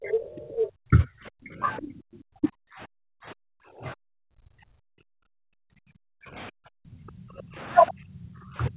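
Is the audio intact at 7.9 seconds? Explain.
No. From 7.9 s to the end at 8.76 s, the echo canceller likely mistook overlapping talk for loudspeaker echo and turned the near talker down with it. This is speech suppressed in double talk: the voice sinks by as much as around 30 dB.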